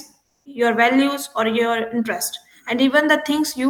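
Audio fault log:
0.23–0.45 s, comfort noise in place of the background: for about 220 ms the real room sound, already faint at about 57 dB below the loudest speech, gives way to a flat, featureless hiss, and the level shifts by about 5 dB until the speech picks up again. That's likely discontinuous transmission, something like Opus DTX, where the sender goes quiet during a pause and the receiver fills the gap with synthetic noise shaped only roughly like the background.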